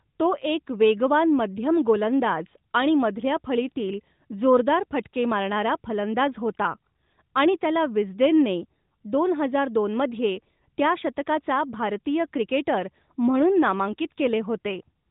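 No technical faults can be heard in this speech.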